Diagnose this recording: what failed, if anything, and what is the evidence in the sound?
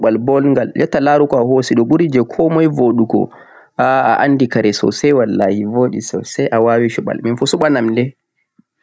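Gain pumping runs through the whole speech clip, at the level-control stage: the gain swings by around 10 dB, pulled down under every loud syllable. The likely cause is input gain set far too high, with a fast limiter repeatedly clamping it. A noise gate would instead cut the gaps to silence.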